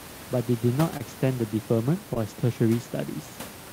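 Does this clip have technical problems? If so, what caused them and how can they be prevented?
Yes. Short concealed packet loss: about 20 ms of speech twice arrived too late, and the receiver extended the preceding sound, leaving brief smears at 0.97–1.02 s and 2.14–2.18 s. Preventing it means a more stable network path or a larger jitter buffer, plus codec forward error correction.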